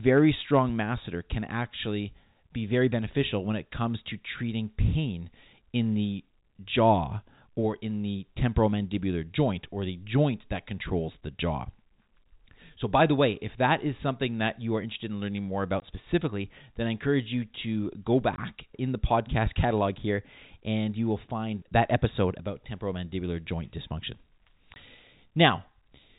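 At 15.80–15.82 s, after "interested in learning more", then 18.36–18.38 s, after "encourage you to go", and 24.74–24.76 s, packet loss filled with silence cuts 20 ms holes, each fitting one lost packet. Each is a brief dropout, a flat waveform gap and a hard-edged blank spectrogram stripe.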